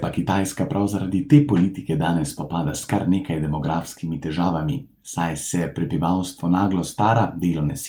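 A short stretch of speech, and nothing in it stands out as a technical problem, so there's nothing here to point to or explain.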